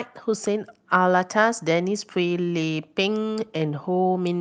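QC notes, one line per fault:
Nothing stood out on listening to the speech in this clip.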